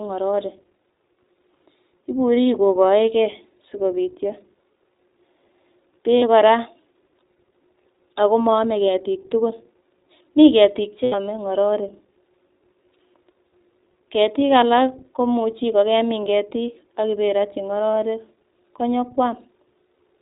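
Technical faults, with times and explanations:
Throughout: iLBC codec. Speech is band-limited to 4 kHz and sounds plainly rough and synthetic, from independent 20 ms frame coding, fitting roughly 15 kbps.
6.18 to 6.24 s, 11.04 to 11.14 s, 17.93 s: lost iLBC frames. Gaps of 40, 80 and 20 ms, the middle one after "mi ketik" and the last after "ak iberotyi", become a held, buzzy vowel from a repeated pitch cycle with noise. Unlike a dropout, there is no silence, and the voice recovers at once.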